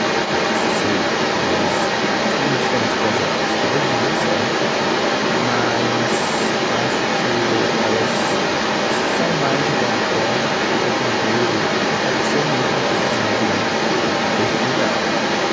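From the start of the clip at 0 s through to its end, a second voice runs alongside the talker: the other side's voice leaking through. It sits at roughly the same level as the main speech, even a little above it, so the two compete throughout rather than the leak surfacing only in scraps. The likely cause is the far end playing over a loudspeaker and the echo canceller failing to strip it from the microphone feed, which is band-limited to 8 kHz by the call processing.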